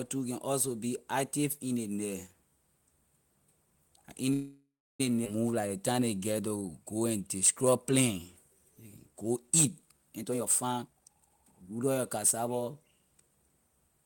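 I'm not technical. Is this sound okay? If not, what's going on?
No, it isn't. At 4.33 s there is a call audio freeze. The sound stops and the last bit trails off as a fading buzz, then about 0.3 s of silence, until 5.01 s. Packets were likely delayed, so playback paused and later resumed where it left off.

At 5.25 s comes a skip ahead. Playback jumps forward, and roughly 0.4 s of the speech is lost. The two sides are joined almost directly, so the listener simply misses a short piece.

Next there is a jitter buffer slow-down, from 5.51 to 7.19 s and again from 7.62 to 10.10 s. The receiver repeats tiny slices of sound to rebuild its reserve. The speech plays at about 90% speed, drawn out but at the same pitch.

Finally, from 10.10 to 12.56 s, there is a jitter buffer speed-up. Tiny slices are cut out, around 0.7 s in total, to reduce the delay. The speech runs at about 126% speed, sounding hurried while keeping its pitch.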